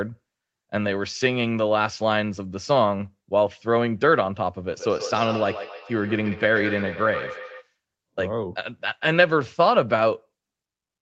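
From 4.65 s to 7.7 s there is feedback echo between two devices: one replays the other's microphone, which recaptures it beyond either echo canceller's reach. Speech recurs roughly every 150 ms, peaking about 12 dB down and growing thinner each pass, unlike one clean echo.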